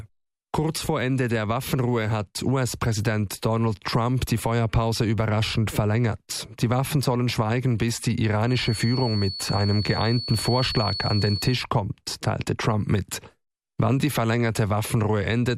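From 8.41 s to 11.63 s a feedback whistle appears: a thin, steady tone at 4.4 kHz sitting roughly 10 dB below the sound and swelling and fading slowly in level. The likely cause is a loudspeaker-to-microphone loop held just short of runaway, sustaining that single frequency.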